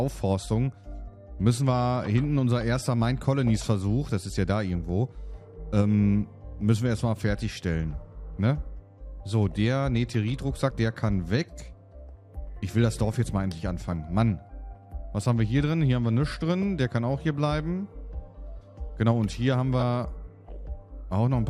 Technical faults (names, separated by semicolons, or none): damaged data in a compressed stream